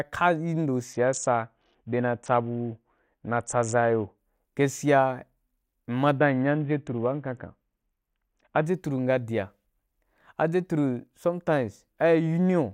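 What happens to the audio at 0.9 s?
At 0.93 s a Bluetooth SBC bit pool drop sets in and lasts until 4.18 s. The link struggled, so the encoder cut its bit budget, which fits a fall to a bit pool near 6, about 60 kbps. The top sub-bands starve. The treble dulls and gritty noise rises.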